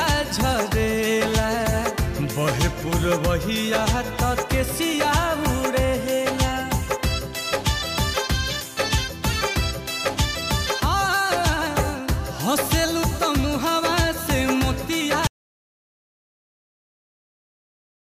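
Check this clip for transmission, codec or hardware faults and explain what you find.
One fault is present. An audio dropout to silence begins at 15.27 s and lasts to the end. The input was likely lost while recording continued writing silence. Sound cuts off abruptly, leaving total silence without room tone.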